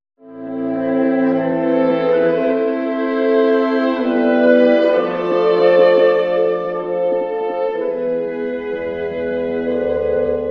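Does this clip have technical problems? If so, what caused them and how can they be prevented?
Yes. Channel delay (comb filtering) runs throughout the clip. One channel arrives about 10 ms late before the mono sum. Shared content cancels at evenly spaced frequencies, starting around 40 Hz. This carves fixed notches across the spectrum. Time-align both channels before summing to mono.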